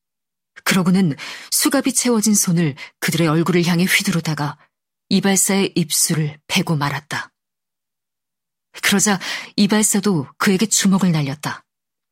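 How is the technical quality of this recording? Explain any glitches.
The technical quality of this recording holds up well, and there are no glitches to explain.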